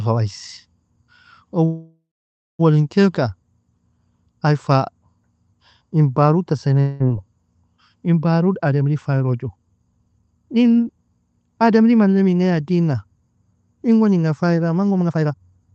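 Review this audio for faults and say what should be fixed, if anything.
There's a call audio freeze from 1.65 to 2.61 s, likely from packets held up in transit draining the jitter buffer. The last sound carries on as a fading buzz and then goes quiet for about half a second. Speech resumes where it stopped, so roughly 0.94 s of gap is inserted but nothing is lost. A deeper adaptive jitter buffer would ride that out.

Right after "in parutta" there's a long network dropout, 6.80 to 7.02 s, likely caused by packets that never arrived. The receiver fills about 0.19 s with a fading continuation of the last sound, and about 200 ms of speech is simply gone. Forward error correction or redundancy would cover a loss that size.

Jitter buffer speed-up shows up twice. From 8.66 to 10.97 s the speech runs at 113% with pitch unchanged, about 0.3 s trimmed. After "inga fayra", 14.91 to 15.72 s, it runs at 169% and sounds really hurried, around half a second removed. 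It's the buffer cutting short pitch-period chunks to shed excess delay. Smoother, slower buffer-level adaptation would prevent it.

The Opus call path is audible too, with its coding noise and nothing above 8 kHz, which fits a 32 kbps setting.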